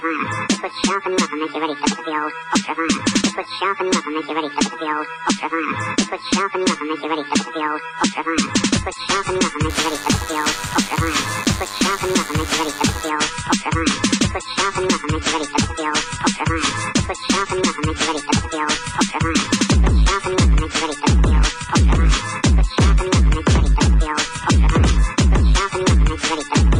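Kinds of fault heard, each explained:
DECT cordless phone buzz: a thin, steady 100 Hz buzz, well below the main sound, from a nearby DECT radio bursting every 10 ms and rectified in the audio circuit.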